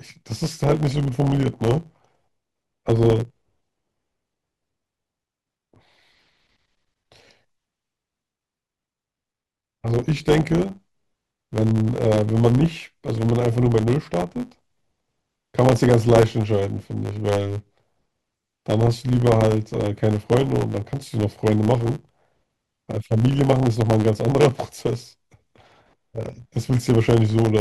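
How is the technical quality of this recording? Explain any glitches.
The recording has one fault, present from start to finish. It is a block size mismatch, the truncated kind. One stage writes longer blocks than the next reads, which fits 512-sample writes. The end of every block is discarded. That causes a steady 100 Hz buzz. The speech also runs 1.07 times fast.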